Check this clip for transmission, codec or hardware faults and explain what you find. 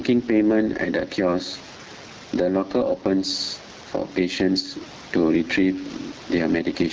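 Two faults run through the whole clip.

Gain pumping, throughout: the gain swings by around 10 dB. The likely cause is input gain set too high, with a fast limiter clamping it.

AMR wideband (HD Voice) codec, throughout: speech sounds rough and raspy, with plainly audible coding damage. That texture points to a low AMR-WB mode, consistent with 8.85 kbit/s, where the vocal-tract model runs short of bits.

The room noise sits about 30 dB below the speech.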